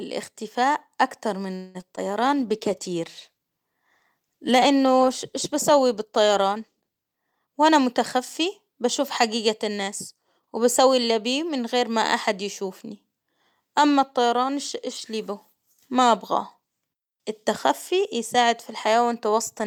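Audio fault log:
1.55 to 1.77 s, call audio freeze: just after "اكتر من" the sound stalls for about 0.19 s, the last bit stretched into a fading buzz or hiss, then it picks up where it left off. Nothing's lost, just a gap pushed in, likely from packets held up until the jitter buffer ran dry.
1.81 s and 1.96 s, short concealed packet loss: two quick smears, the second right after "اكتر من". Each time about 20 ms never made it to the decoder, so the receiver papered over it by carrying the previous sound forward and blending back in.
2.25 to 8.37 s, call bitrate drop: the encoder got squeezed from 64 down to 21 kbps after the bandwidth estimate fell, sitting at the bottom for nearly 5 s. You hear it go coarse and watery with the top end dulled until the rate comes back.
7.45 to 9.01 s and 9.48 to 10.80 s, jitter buffer speed-up: the sound runs about 6 to 7% fast at unchanged pitch, ending just before "اللي بيه من غير". 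The buffer had too much queued, so the receiver snipped out pitch periods, about a tenth of a second each stretch, giving a slightly hurried feel.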